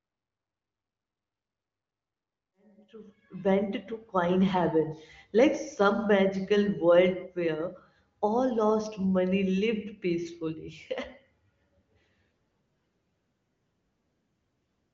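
Nothing here needs fixing: it's a speech recording that fades in gently over its first few seconds, reaching full level by about 3.97 s, and it has the typical sound of an HD Voice call, with no content above roughly 6.9 kHz.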